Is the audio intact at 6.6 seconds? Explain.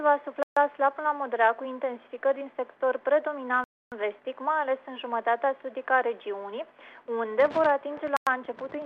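Yes, at 6.6 seconds the audio runs continuously, with no dropout, click, distortion or other fault.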